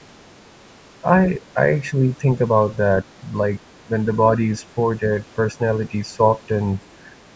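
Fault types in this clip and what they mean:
Speech suppressed in double talk: the speech dips in level four times, at 1.39–1.45 s, 1.91–2.26 s, 3.03–3.07 s and 3.83–3.91 s. The short dips are sharp, reaching about 10 to 15 dB, and the deepest is at 3.83 s. The second is a longer, shallower sag of about 5 dB. The likely cause is an echo canceller that, with both ends talking, mistook the near talker for loudspeaker echo and attenuated both.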